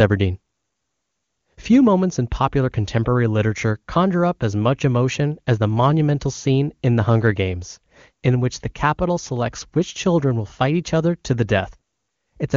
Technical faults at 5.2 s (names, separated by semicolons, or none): none